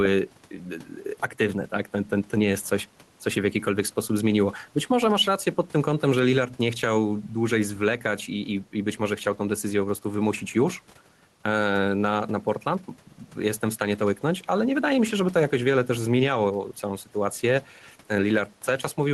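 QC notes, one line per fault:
Throughout, gain pumping: with the room noise sitting about 36 dB below the speech, the level swings by around 5 dB, and loud and soft passages sound squashed together. The likely cause is gain set too high with a fast limiter or compressor clamping down on peaks.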